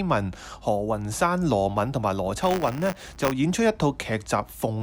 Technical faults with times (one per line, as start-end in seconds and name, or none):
2.41-3.32 buffer tearing